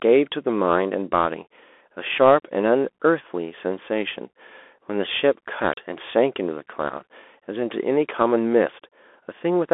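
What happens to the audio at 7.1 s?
At 7.1 s the speech sounds thin and scratchy over a granular hiss, with nothing above 3.8 kHz. The Bluetooth CVSD headset codec, running throughout, causes this, its coarse one-bit steps fitting a 64 kbps link.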